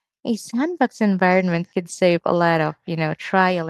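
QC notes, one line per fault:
No fault to note.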